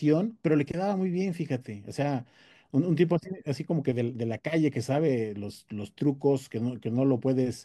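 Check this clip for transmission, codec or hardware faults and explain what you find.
No transmission or hardware faults are audible here.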